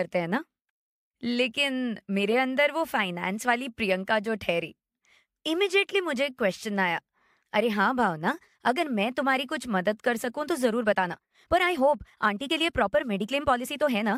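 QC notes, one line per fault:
10.66–14.17 s, time-stretched section: software likely squeezed the last part of the audio to fit a shorter length, running it 1.35 times faster while keeping pitch by dropping short pieces of the waveform. From 10.66 s to the end the speech suddenly turns rushed. The pace jumps abruptly while the pitch stays where it was.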